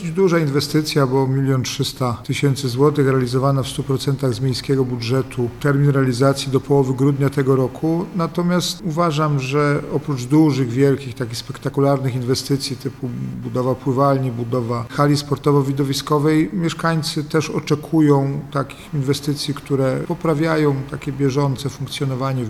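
From start to finish the recording carries computer activity noise: a faint buzzing, chirping layer pulsing at roughly 200 times a second, sitting around 30 dB below the main sound. Shifting load on the processor, graphics card or mouse disturbs the ground the audio circuit shares, so the interference tracks the machine rather than the audio. On a spectrogram it shows as a comb of harmonics near 200 Hz spacing; the waveform shows a fine, regular ripple riding underneath.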